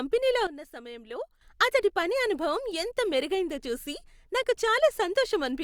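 At 0.47 s the speech drops abruptly by about 12 dB, and the background noise drops with it in the same step. It stays at that lower level until 1.41 s, where it jumps straight back up just before "అతడి పని అనుభవం ఎంతగా". This is a sudden gain jump. The likely cause is a digital gain change applied between one sample and the next with no ramp, so both edges are hard steps rather than fades.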